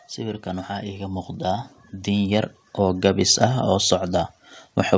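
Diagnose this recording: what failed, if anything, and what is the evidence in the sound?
Automatic gain rising at the call-processing stage. Speech and background swell together by about 5 dB from 0.16 to 1.36 s, then by about 4 dB from 2.04 to 3.33 s. The AGC judged the input too quiet and ramped its gain gradually.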